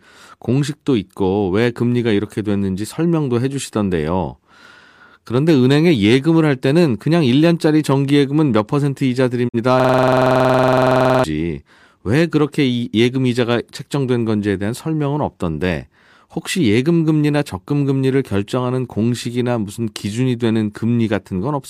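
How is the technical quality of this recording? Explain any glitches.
Two clear glitches disrupt the speech within about two seconds of each other.

At 9.47 to 9.58 s there is a digital broadcast dropout. The receiver got a corrupt or missing frame and muted until valid data returned. It fades out over about 20 ms and leaves a gap of about 43 ms, which fits a single lost frame. It is heard as a brief hole in the speech. A waveform shows a short tapered dip to flat silence, and a spectrogram shows a narrow, fully blank vertical band.

From 9.80 to 11.24 s comes a system hang loop. The computer stalled while the audio hardware kept replaying its ring buffer. The same 46 ms fragment, which fits a 2048-sample buffer, repeats about thirty times at 21.5 Hz. It is heard as a rapid machine-gun stutter, and about 1.5 s of real speech is lost. The waveform shows an identical block tiled end to end. 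The spectrogram shows a frozen pattern repeating like wallpaper, with regular vertical seams at each loop boundary.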